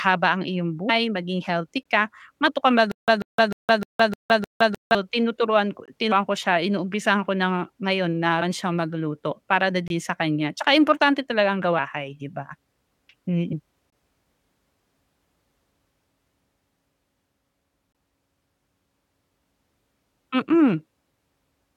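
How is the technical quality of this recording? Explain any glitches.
The recording is damaged by three kinds of fault: repeated skips of compressed audio, regular short holes at chunk boundaries, and a two-second stuttering loop.

Compressed frames skipped at 0.88, 2.46 (after "maging healthy ka"), 6.11, 8.41 (between "ko na ngayon na" and "siyang magluto para na"), 11.77 and 13.52 s. The decoder lost or rejected runs of frames, and the jumps fit frames of about 23 ms. The audio leaps forward between roughly a tenth and nearly half a second, and each join is a soft smeared blip.

Gaps between chunks at 1.83 (after "maging healthy"), 5.86, 9.88, 13.90 and 17.92 s. Each boundary of the 4 s chunks has about 23 ms of inserted silence. Nothing is lost. Each one is a short hole at a steady four-second rhythm.

Stutter with silent gaps from 2.91 to 4.95 s, likely caused by a stalled stream retrying its last fragment. 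A 140 ms burst repeats six times, each followed by 165 ms of dead silence, giving a mechanical 305 ms pulse. The audio that should have played there is gone.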